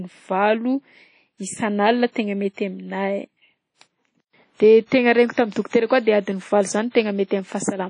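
A low-bitrate transform codec has run over the whole speech recording, and the character points to WMA compression, likely at a bitrate around 32 kbps. Its coarse quantisation leaves plainly audible damage: nothing survives above about 10.1 kHz, so the top end is cut off, and the discarded detail is replaced by a washy, ringing texture with a hiss that swells and fades with the level of the speech.

The same codec's long transform blocks cause pre-echo twice. At 4.86 s, a sharp attack sits late in a block, so quantisation noise sized for it spills backwards across about 53 ms, heard as a brief hiss leading into an onset that sounds softened and smeared. At 6.90 s the same thing happens again, with roughly 47 ms of hiss arriving just ahead of a blurred attack.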